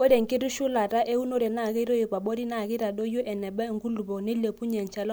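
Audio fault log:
No audible faults detected.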